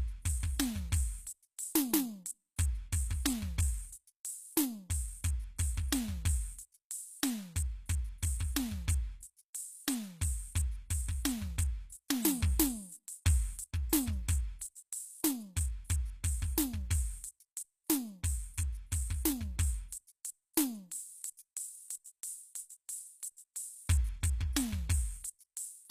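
The music was likely squeezed through HE-AAC compression at a very low rate, with the damage plainly audible from start to finish. The codec keeps only the lower spectrum and fakes the treble by copying lower bands upward under a coarse envelope, so the highs sound gritty and metallic, with harmonics that fail to line up. Nothing is present above about 14.9 kHz, which fits a bitrate near 20 kbps.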